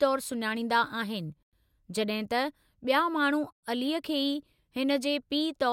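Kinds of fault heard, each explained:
Gap between chunks: the speech stops dead twice for 100 ms, at 1.43 to 1.53 s and again at 3.53 to 3.63 s, each hole followed by the speech carrying on. The two holes are 2.1 s apart, which points to audio handled in 2-second chunks, with silence left at each join between one chunk and the next.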